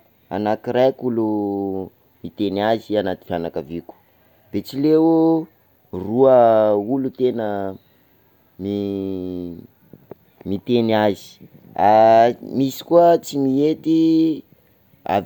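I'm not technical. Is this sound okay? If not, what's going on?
Yes, nothing in this recording stood out as a problem when I listened to it.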